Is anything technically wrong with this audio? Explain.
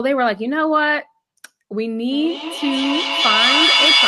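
Yes. From 2.11 s to the end there is feedback echo between two devices. One device replays the other's microphone, which recaptures it. Repeats arrive about every fifth of a second and build to about 5 dB above the speech.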